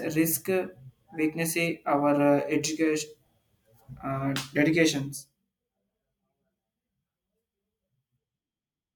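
From 5.10 to 5.53 s the speech carries zipper noise. The level drops by roughly 15 dB in 1 dB steps, about forty per second, with no smoothing. Each jump leaves a small click. Together they form a fast ticking under the fading voice.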